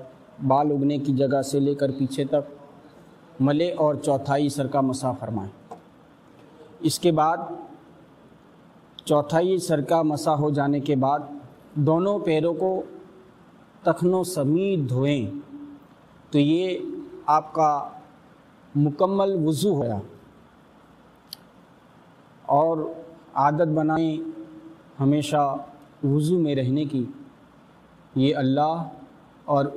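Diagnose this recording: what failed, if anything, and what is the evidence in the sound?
A block size mismatch at the driver or buffer stage: one stage writes blocks longer than the next reads, and each block's tail is discarded. Throughout, a steady buzz sits at 43.1 Hz, which fits 1024-sample blocks at 44.1 kHz, while playback speed stays at 1.0.

Compressed frames were skipped at the codec or storage stage, so the decoder never played them. At 19.81 s the audio jumps ahead about 150 ms, a handful of frames, and at 23.96 s about 50 ms, a couple of frames. Each jump is a multiple of 26.1 ms frames, and overlapping neighbours smear each join into a soft blip rather than a click.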